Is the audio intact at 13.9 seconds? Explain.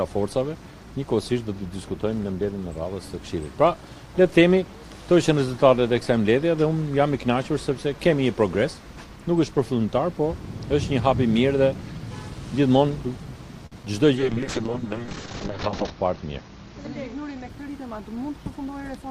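No. Short concealed packet loss spans 13.83 to 13.92 s, with a second loss at 13.85 s. Missing packets were filled by extending the preceding sound, adding about a hundredth of a second, which smears the audio.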